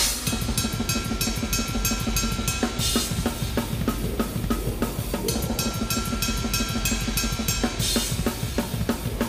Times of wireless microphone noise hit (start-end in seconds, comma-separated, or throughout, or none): none